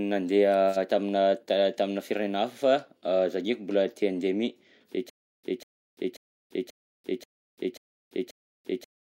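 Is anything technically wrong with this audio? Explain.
Yes. From 5.10 s to the end, the speech turns into a stutter with silent gaps: a 0.19 s fragment repeats seven times, each followed by about 0.34 s of dead silence, every 0.54 s. This is likely a stalled stream replaying its last buffer between retries, so the speech that should follow is lost.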